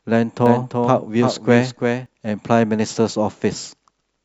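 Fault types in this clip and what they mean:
Doubled audio track: a dry copy of the speech trails about 300 ms behind, some 5 dB quieter, likely captured again by a slower path.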